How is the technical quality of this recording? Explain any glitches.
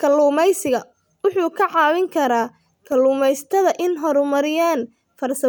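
One glitch stands out. From 2.87 to 2.92 s, just after "wuxuu ka caawin karaa", the speech briefly drops by about 6 dB for 50 ms. The likely cause is one channel dropping out: with one stereo side missing, the mono sum loses half its shared signal. Unlike a full dropout, the sound dips but never goes silent.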